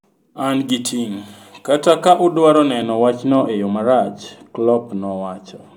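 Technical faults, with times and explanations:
2.82 s to the end, de-emphasis applied wrongly: right after "ting’ kata ka udwaro" the speech suddenly goes dull and muffled, like someone threw a blanket over it. What's happened is a treble-cut filter, the kind meant to undo pre-emphasis, got applied to audio that didn't need it, or applied a second time. The response slopes down smoothly toward the top, about 11 dB lower at 10 kHz than at 1 kHz, so the crispness of the consonants is dulled.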